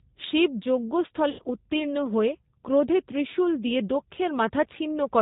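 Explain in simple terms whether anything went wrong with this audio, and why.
Two things went wrong. The whole clip passed through the G.729 codec, a phone-call compressor. It keeps only sound below 4 kHz and rebuilds speech from a rough model, so everything here sounds muffled, slightly rough and a little synthetic.

From 1.30 to 1.42 s, right before "উত্তীর্ণ হয়ে ক্রোধে ত্রিশূল", VoIP packet loss was concealed by the speech codec. About 90 ms of audio went missing, which fits roughly three lost packets. The decoder filled the gap by stretching the last sound into a fading buzz or noise. It then needed a moment to recover.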